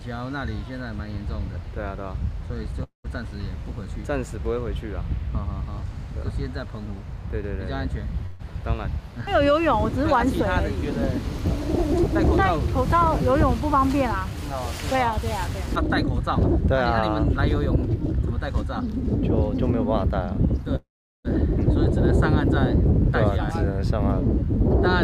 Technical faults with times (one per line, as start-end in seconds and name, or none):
2.83-3.06 call audio freeze
8.26-8.41 call audio freeze
12.81-18.83 jitter buffer speed-up
20.76-21.27 call audio freeze